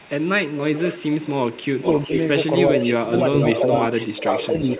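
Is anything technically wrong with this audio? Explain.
Yes. From 0.0 to 2.2 s and again from 2.74 to 4.79 s there is an echo leak: a copy of the speech trails by about 417 ms. That is likely a loudspeaker echo the far-end canceller failed to remove. It sits about 10 dB under the speech at first, then about 5 dB under.

Speech suppressed in double talk occurs from 1.74 to 2.12 s, with brief dips down by roughly 20 dB, and from 2.73 to 4.79 s, down by roughly 15 dB. The likely cause is the canceller attenuating the talker alongside the echo.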